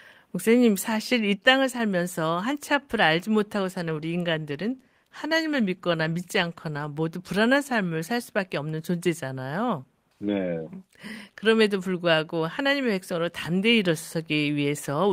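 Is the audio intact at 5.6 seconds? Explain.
No. At 5.6 seconds the speech is inside a call bitrate drop lasting from 3.67 to 6.95 s. The call's bandwidth estimate fell, and the encoder was told to spend far fewer bits on each stretch of audio, roughly halving its budget. The change in quality fits a fall from about 32 kbps to about 18 kbps, held at the lowest rate for about 3.2 s. The coarser coding makes the speech sound rough and watery until the rate recovers.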